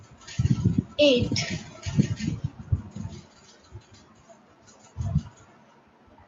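At 1.25 to 1.27 s the speech turns briefly rough and noisy for a single 20 ms stretch, with no gap or dropout. This is a lost packet rebuilt from error correction: one packet went missing, but the next one carried a low-bitrate copy of it through Opus in-band forward error correction, and the decoder played that coarser copy in its place. The clip passed through a WebRTC call path with Opus at 48 kbps, limited to 8 kHz.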